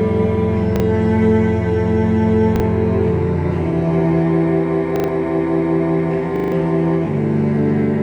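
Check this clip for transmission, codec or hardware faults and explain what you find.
Four repeated-buffer faults are audible. They occur at 0.76 s and 2.56 s (one extra play each), 4.96 to 5.08 s (three extra plays), and 6.36 to 6.52 s (four extra plays). New audio arrived late, so the device replayed its last 40 ms block. Each repeat joins hard. This gives short stutters. The last run loses well over a tenth of a second.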